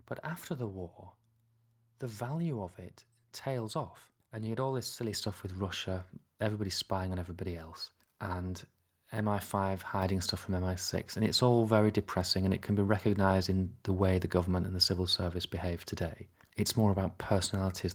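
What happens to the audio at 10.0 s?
At 10.02 s the microphone volume steps up by about 4 dB. The call software has raised the input gain in a single step. The speech and the background both get louder at once. On the waveform, the envelope widens abruptly, and a spectrogram shows every band brightening together at that instant.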